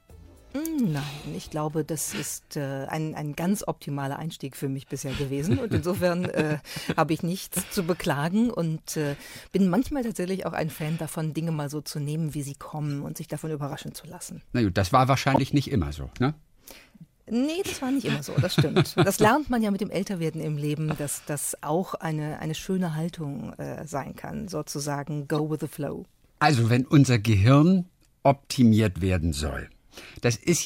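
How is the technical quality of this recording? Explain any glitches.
Three short glitches mar the recording: corrupt frame decoded errors at 12.89–12.92 s, 15.34–15.39 s and 25.35–25.39 s. Damaged compressed frames were played anyway, misplacing energy in frequency. Each is a brief chirp or noise burst. The first is faint, the second and third louder.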